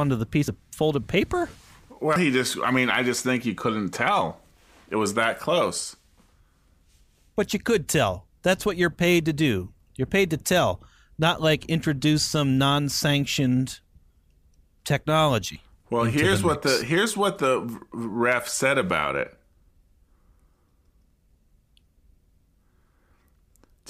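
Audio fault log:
0.48 s, 2.16 s, 15.56 s: dropped buffer (overrun). Each is a sudden jump forward in the speech. The likely cause is samples not being collected before the hardware overwrote them. Roughly 40 ms, 100 ms and 70 ms of audio go missing, with no silence in their place. On the waveform, the two sides meet at an abrupt discontinuity. The spectrogram shows a thin vertical broadband line where the harmonics jump.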